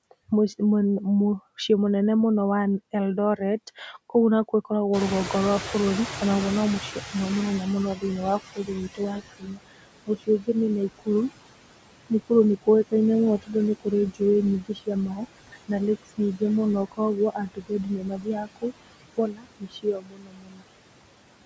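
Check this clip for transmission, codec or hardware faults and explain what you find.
The problems all come from the call's noise suppression. The audio reaches up to 8 kHz, which fits wideband call microphone processing, and the room noise is real background that jumps by about 21 dB around 5 s.

Noise suppressor artifacts are present throughout. The background sinks in the gaps and swells back under the talking. The suppressor estimates the steady noise and subtracts it band by band, frame by frame, taking out about 21 dB. Because that reduction varies from frame to frame, the remaining noise pumps instead of staying even.

Speech cut by the noise suppressor happens three times. Between 3.37 and 4.71 s, roughly a tenth of a second of speech drops by up to about 11 dB. From 7.95 to 11.08 s, about a second in total is lost, with drops of up to about 22 dB. From 12.1 to 20.64 s, around three seconds are affected at similar depth. 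Quiet syllables and word endings sound swallowed because the suppressor mistook them for noise and turned them down with it.

Noise suppressor catching up runs from 4.93 to 9.22 s, as the room noise rises. The louder background first comes through too strongly and then settles down over about 4.3 s. Its estimate of the noise lagged the sudden change, so at first it removed only about 17 dB instead of its full amount, and the reduction deepened gradually as the estimate adapted.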